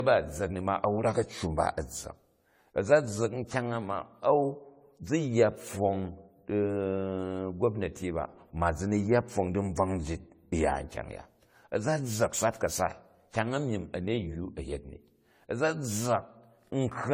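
From start to finish the speech has likely been through generation loss: decoded and re-encoded over and over, around seven times, with a lossy codec whose character fits AAC-LC at about 64 kbit/s. Each pass requantised the signal on a shifted frame grid, so the errors piled up. The result is a swirly, hollow quality with smeared high detail and softened consonant attacks, more degraded than one encode at that rate would leave.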